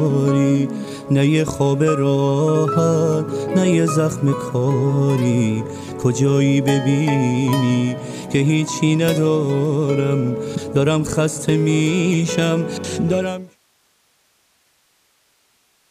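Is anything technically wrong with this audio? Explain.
No, nothing stood out on listening, and the smooth fade-out that begins around 13 s and finishes at 13.59 s sounds like a deliberate edit with no click or hard edge.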